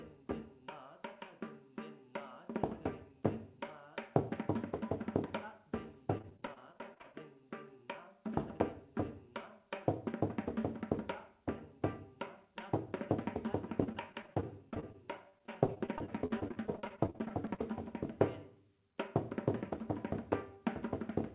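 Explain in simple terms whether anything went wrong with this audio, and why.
Repeated packet loss (robotic sound) occurs twice, from 6.18 to 7.16 s and again from 13.84 to 17.60 s. The audio travelled over a call connection, and small chunks of it kept arriving late or not at all. Each time, the receiver filled the hole by stretching out the last bit it had, with the longest gaps about 26 ms and 42 ms. Roughly a fifth to a quarter of each stretch is patched, so the sound turns choppy. Nothing above 4 kHz comes through, as expected for this phone-style call link.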